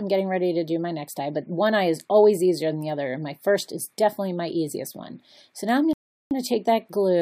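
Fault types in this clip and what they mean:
Rebuffering stall: at 5.93 s the sound drops to silence for about 0.38 s, until 6.31 s, because playback ran out of downloaded audio and waited for more to arrive. It then picks up exactly where it stopped, so nothing is skipped, but roughly 376 ms is added to the running time.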